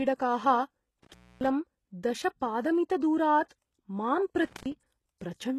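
Throughout, the speech carries heavy codec damage with nothing above 12.3 kHz, likely from HE-AAC compression at a low bitrate near 16 kbps. Rebuilt treble makes s sounds gritty and metallic.

From 1.03 to 1.49 s, an intermittent contact opens the line for about 276 ms. The sound drops out or breaks up, with crackle at the edges and hiss underneath.

At 3.49 s, pre-echo spreads codec noise 22 ms ahead of an attack. A short hiss comes before it, and the attack sounds smeared.

From 4.45 to 4.72 s, the intermittent contact returns, open for about 137 ms, with the same breakup and edge crackle.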